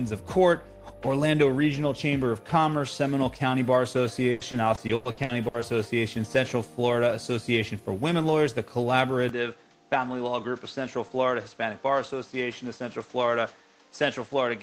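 From 4.31 s to 5.64 s the audio turns choppy and robotic, the sound of repeated packet loss. Nine short holes, the longest 100 ms, are patched by stretching the preceding sound, so about 35% of that stretch is filler. On a spectrogram this shows as smeared, frozen horizontal bands repeating in place of detail, and the waveform shows blocky, near-identical cycles. From 9.29 s to the end, with no silence at the join, the sound drops by about 5 dB and turns duller. The spectrogram shows a hard ceiling with nothing above 7.9 kHz, and a new noise floor sits about 30 dB below the signal as a faint haze. These changes point to the input having likely switched to a poorer device with a narrower band.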